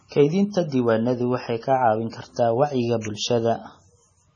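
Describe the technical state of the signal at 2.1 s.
At 2.1 s there is pre-echo, from 2.10 to 2.13 s. A short smear of hiss, about 31 ms long, arrives just ahead of a sharp attack in the speech, and the onset itself sounds softened. The transform block containing that attack spread its quantisation noise evenly across its whole length, so noise sized for the loud onset also filled the quiet moment before it. Unlike a click, it is a brief wash of noise rather than a single spike. Unlike reverb or an echo, it comes before the attack instead of trailing after it.

Underneath this, the speech has heavy damage that points to MP3 compression, likely at a bitrate around 24 kbps. Nothing is heard above 10 kHz, and quieter detail sounds watery and swirly as weak frequency lines drop in and out from frame to frame. A plain low-pass filter would cut the treble cleanly, without this shifting, metallic texture.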